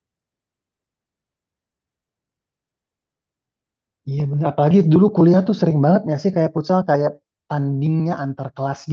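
Nothing in this speech recording sounds technically faulty.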